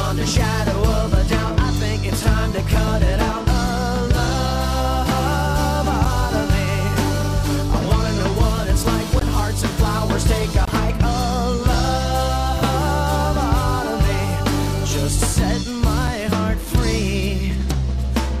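Blocks of digital silence occur at 6.05 s, 9.20 s, 10.65 to 10.68 s and 16.07 s, lasting about 8.7, 17.4, 23.2 and 5.8 ms. In each, output samples were dropped to zero, likely because the buffer wasn't filled in time, the longest fitting a 1024-sample buffer. The two shortest gaps are heard as ticks, with the 23 ms gap heard as a brief hole.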